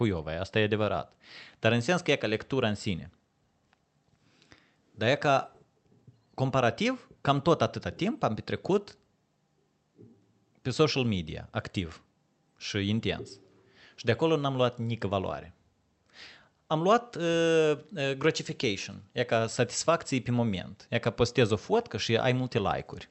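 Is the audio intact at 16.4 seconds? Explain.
Yes, at 16.4 seconds the speech comes through intact, with no dropout, glitch or distortion beyond the ordinary character of the call path it travelled through.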